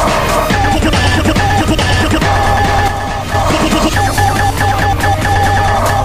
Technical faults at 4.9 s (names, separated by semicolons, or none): none